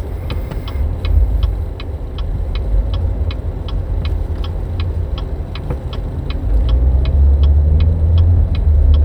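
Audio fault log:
No faults can be heard in this recording of sounds. Nothing in it calls for a log entry.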